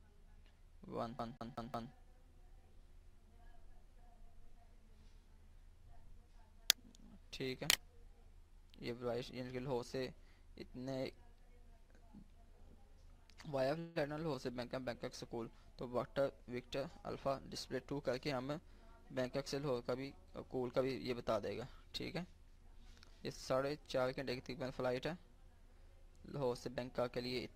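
From 1.19 to 1.92 s the audio falls into a CD stuck on one turn. A slice about 0.18 s long plays four times, each pass broken by a short mute where the laser jumps back a track at the same scratched point on the disc. The repeats are identical and evenly spaced, a machine-regular stutter. A network fault would smear, fade or stretch the audio instead of replaying one exact fragment on a fixed beat.

At 13.79 to 13.98 s there is a call audio freeze lasting about 161 ms. The last sound is held on as a fading buzzy continuation rather than dropping to silence, and afterwards the audio resumes exactly where it paused, so nothing is lost and the timeline is simply pushed later by that amount. The likely cause is delayed packets draining the jitter buffer. Unlike the CD fault, nothing repeats.

From 15.85 to 18.77 s comes a jitter buffer speed-up. The audio runs about 5% fast while keeping its pitch, because the receiver trims tiny pitch-period pieces again and again, roughly 150 ms in total, to shed the delay that built up earlier. 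It sounds slightly hurried. Pitch staying put sets it apart from a plain playback-speed error.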